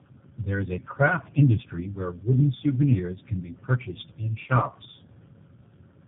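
Throughout the speech, tandem speech coding: two low-rate speech codecs in series, likely AMR-NB then G.729A, the second re-coding the first's errors. It sounds rough, muffled and warbly. A spectrogram shows nothing above 3.8 kHz and blurred, wavering harmonics.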